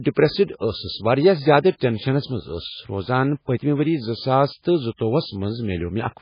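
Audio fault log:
Throughout, MP3 compression: the speech is sharply cut off above 5 kHz and swirls and warbles as weak frequency components flicker on and off. This is likely heavy MP3 encoding at a very low bitrate, around 16 kbps. The flickering watery texture sets it apart from a plain low-pass filter.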